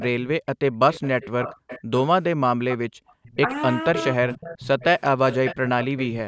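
From 0.0 to 0.07 s, a faint copy of the speech returns about half a second late. This is likely an echo leak, where the far-end canceller let loudspeaker sound back through.

At 0.38 to 0.42 s, the speech drops out deeply for a moment. This is speech suppressed in double talk, likely the canceller turning everything down while both sides spoke.

The echo leak returns from 0.92 to 1.82 s and from 2.69 to 3.36 s. It is well below the speech and still about 0.49 s behind.

Within that stretch, from 2.89 to 3.16 s, the background is gated by the echo canceller. The room sound falls away sharply for about 0.2 s, then comes back.

Double-talk suppression dips the speech slightly at 3.44 s. It cuts deeper from 3.91 to 4.28 s, in pieces.

From 3.94 to 6.08 s the echo leak is louder, about 10 dB under the speech.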